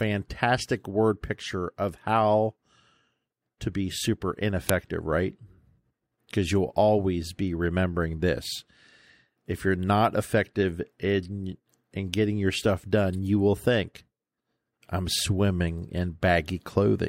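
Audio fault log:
4.69 s, file header played as audio: a second WAV piece was joined without its header being stripped, so those few dozen bytes play as samples, giving a sharp, loud click in the speech. It shows as a brief spike on the waveform and a thin vertical broadband line on the spectrogram.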